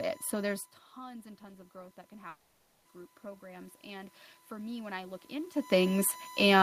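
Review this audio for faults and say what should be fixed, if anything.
A steady USB whine at 1 kHz sits about 25 dB below the speech for the whole clip. Current drawn in the bus's 1 ms frames is leaking into the audio through shared power or ground. Prevent it with an isolated or filtered USB supply, a ground-loop isolator, or a separate audio interface power feed.

Automatic gain rising begins at 0.97 s and continues to the end. The input fell by 16 dB, and the gain control responded by slowly raising its gain, so speech and room noise swell together over time. Prevent it by setting a fixed input gain with AGC disabled, and by keeping the talker at a consistent distance from the microphone.

From 2.29 s to 2.87 s, 560 ms of speech is missing. The receiver covers the gap with a fading continuation of the last sound, then resumes later without the lost portion. The likely cause is a long network dropout. 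Prevent it with a more stable connection, a larger jitter buffer, or forward error correction on the stream.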